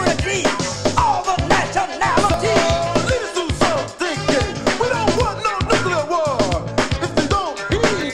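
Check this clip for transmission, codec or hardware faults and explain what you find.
One fault is present: clock drift buffer slips, heard as a regular series of short clicks from 0.93 s to 8.01 s, recurring every 1.41 s, about seven in all. The likely cause is two devices running on separate clocks that disagree by something on the order of 500 parts per million. The buffer between them creeps until a small block, a few dozen samples, is dropped or repeated, leaving a tiny discontinuity in the waveform. Packet loss or dropouts leave audible gaps at irregular moments. These are brief ticks at a metronome-steady spacing.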